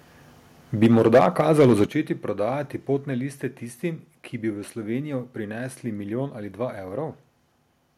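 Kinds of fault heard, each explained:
Microphone overload: From 0.82 to 1.84 s, peaks are flattened about 7 dB past full scale, giving a harsh crackle only on the loudest syllables, likely from excessive input gain.
Microphone volume stepped down: Level drops abruptly at 0.86, 1.86 and 2.97 s, by about 3, 8 and 2 dB. Voice and background fall together, unlike a fade or gate, likely from software reducing input volume.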